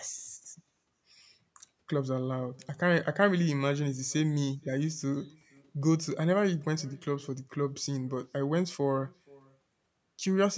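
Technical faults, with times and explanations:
Throughout, echo with no canceller: the far end plays the call over a loudspeaker, its microphone picks it up, and nothing subtracts it, so every phrase returns about half a second later as a faint, thin copy, about 28 dB down.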